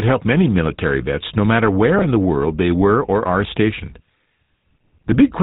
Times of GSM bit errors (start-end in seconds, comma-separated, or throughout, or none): 1.98-2.05, 5.12-5.23